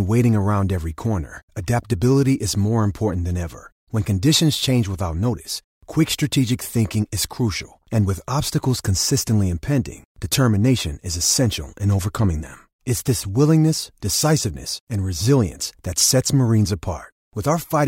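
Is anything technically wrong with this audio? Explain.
No, the speech signal carries through without any audible technical fault, with steady level and uninterrupted playback throughout.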